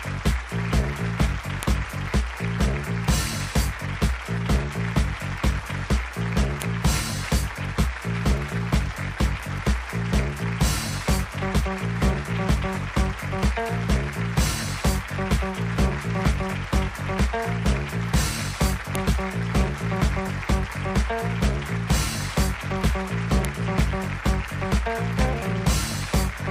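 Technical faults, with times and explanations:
1.63, 6.62, 18.95 and 23.45 s: file header played as audio. Separate WAV pieces were joined with their headers kept, so those header bytes play as samples, giving a sharp, loud click at each join.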